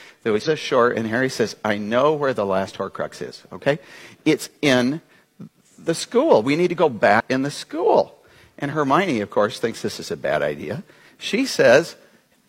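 The audio carries two brief glitches from damaged data in a compressed stream. The first runs from 0.42 to 0.48 s. The second runs from 7.16 to 7.21 s. Each lasts under 60 ms and comes through as a short chirp, squawk, click or hole. At those points the stored bytes are corrupt. The decoder cannot read the affected frames properly. It loses its place and hunts for the next valid frame header before playback settles again.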